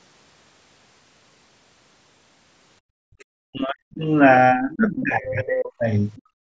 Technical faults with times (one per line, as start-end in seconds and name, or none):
2.80-3.16 background gated by the echo canceller
3.19-3.25 other side's voice leaking through
3.44-4.07 speech suppressed in double talk
3.68 concealed Bluetooth headset packet loss
4.54-5.84 speech suppressed in double talk
4.72-5.02 other side's voice leaking through
6.16-6.22 other side's voice leaking through
6.22-6.43 background gated by the echo canceller